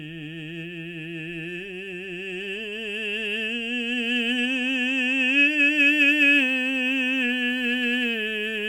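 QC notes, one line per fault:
No faults heard in this music.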